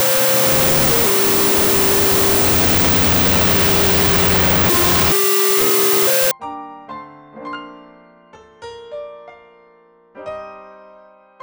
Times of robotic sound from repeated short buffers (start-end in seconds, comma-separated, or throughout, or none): none